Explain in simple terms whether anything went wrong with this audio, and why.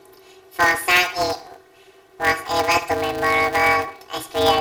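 Throughout the speech, a planar audio read as interleaved fault gives a robotic buzz at about 188 Hz. Each 5.33 ms block, which fits a 256-sample block, is played left then right at double speed. The blocks are too short for a clear octave shift.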